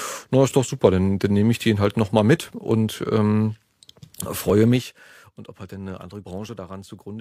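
From 4.70 to 5.10 s the speech drops roughly 15 dB as zipper noise: 2 dB unsmoothed steps, about thirty a second, tick audibly, unlike a smooth fader move.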